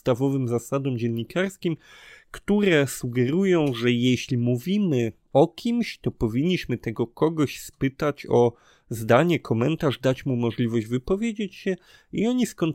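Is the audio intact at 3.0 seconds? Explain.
Yes, the speech at 3.0 seconds is intact, with no dropout, click, distortion or other fault audible at that point.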